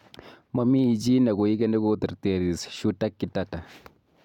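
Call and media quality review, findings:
No faults found in the signal path; the speech signal is technically intact across the clip.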